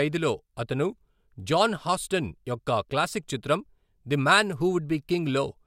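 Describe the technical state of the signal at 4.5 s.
At 4.5 s the speech signal is intact, with no audible fault at that moment.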